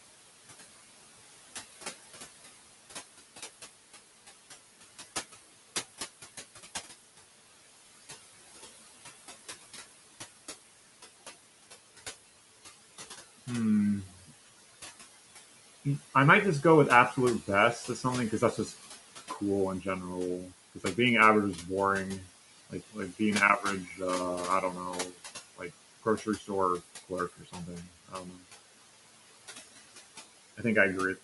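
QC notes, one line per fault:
Throughout: noise suppressor artifacts. The room noise, about 13 dB below the speech, is pulled down by about 14 dB between phrases and swells back under each one.
16.14–18.74 s, 19.36–19.86 s, 20.45–20.82 s, 22.2–24.0 s, 24.73–28.43 s: speech cut by the noise suppressor. Quiet speech energy was classified as noise and attenuated with it. Dips reach about 9 to 18 dB, deepest in the last span, where roughly a second of material sounds swallowed.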